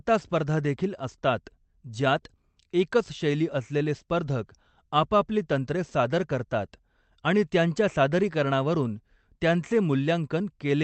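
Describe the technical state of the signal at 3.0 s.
At 3.0 s the speech is intact, with no dropout, glitch or distortion, only the steady coding texture and the roughly 8 kHz upper limit of the Opus call path it travels through.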